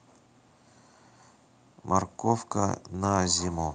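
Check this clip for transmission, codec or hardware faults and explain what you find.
Nothing found: no audible fault at any point in the speech.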